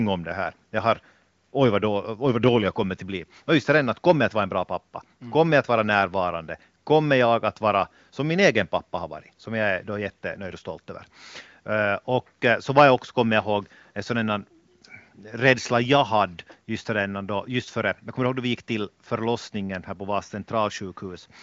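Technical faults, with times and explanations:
No technical faults are present, so there are no times or explanations to give.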